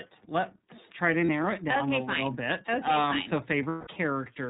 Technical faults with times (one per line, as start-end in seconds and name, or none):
0.00-4.49 iLBC codec
1.26-1.29 lost iLBC frames
3.68-3.87 lost iLBC frames